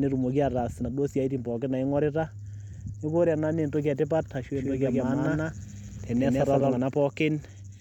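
Speech, with a doubled audio track from 4.55 to 6.77 s. A second, full-band copy trails by roughly 150 ms at about the same level. It has no decay or room colour. It cuts in and out abruptly. A slower second capture path is the likely cause.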